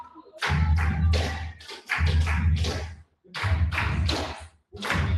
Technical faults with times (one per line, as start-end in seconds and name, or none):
0.00-5.18 noise suppressor applied to music or sounds
0.00-0.42 sound cut by the noise suppressor
1.53-1.90 sound cut by the noise suppressor
2.95-3.34 sound cut by the noise suppressor
4.45-4.79 sound cut by the noise suppressor